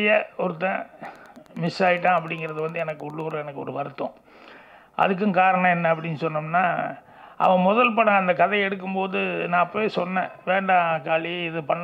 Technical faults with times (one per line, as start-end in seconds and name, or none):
1.02-3.39 Wi-Fi interference